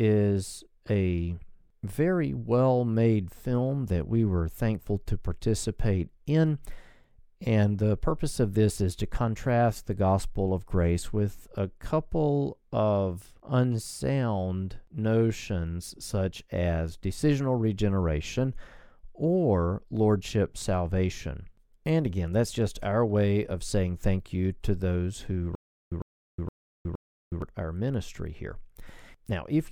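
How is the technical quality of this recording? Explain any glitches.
There is one glitch, a stutter with silent gaps from 25.55 to 27.42 s: a 103 ms fragment repeats four times, separated by 365 ms of dead silence, a 467 ms cycle. The stream likely stalled, replaying its last buffer at each retry, so the intended audio there is lost.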